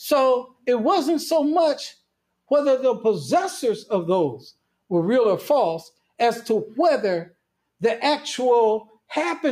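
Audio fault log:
0.47–0.66 s, sound cut by the noise suppressor: mistaking this sound for noise, the suppressor pulled it down by up to about 18 dB.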